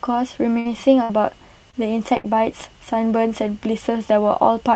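At 0.59 to 0.67 s and again at 1.03 to 1.11 s, a burst of packet loss takes out about 60 ms of speech. The receiver extends the last sound for roughly 56 and 61 ms, fading it, so a held buzz or hiss stands in before speech resumes with that stretch gone.

At 1.71 to 1.75 s, a short concealed packet loss drops about 20 ms, which the decoder covers with a brief synthetic continuation, heard as a quick smear or wobble before it blends back.

At 2.17 to 2.26 s, a third burst of packet loss again loses about 60 ms, with a 70 ms fading fill and another few milliseconds skipped as playback catches up, leaving a longer buzz or hiss before speech picks up. Throughout, the call codec's band limit, which fits an 8 kHz cutoff, leaves the top end dull.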